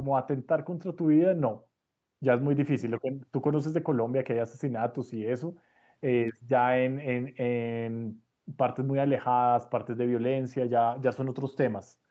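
No technical faults can be heard in this speech.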